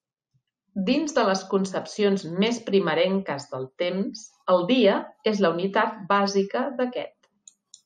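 No technical faults occur at any point in the recording.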